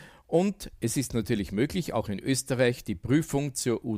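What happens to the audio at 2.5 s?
Nothing goes wrong at 2.5 s; the audio runs through that moment intact, with no dropout, click or distortion.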